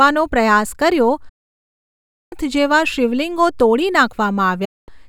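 At 1.29 s the speech cuts to silence for 1.02 s, returning at 2.33 s, then again from 4.65 to 4.89 s. This is digital broadcast dropout: the receiver muted on bad frames with an 8 ms fade, losing that programme. Waveform and spectrogram show clean, empty gaps.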